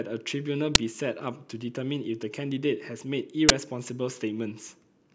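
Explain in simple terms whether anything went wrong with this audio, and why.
Two things went wrong, both the same kind of fault: an uninitialised buffer. At 0.75 s and again at 3.49 s the speech is interrupted by a brief, harsh crack or burst of digital noise. The playback system sent out a chunk of memory before any audio had been written into it, so leftover junk got played as sound. The first lasts about 8 ms and the second about 16 ms, which fits 128-sample and 256-sample buffers.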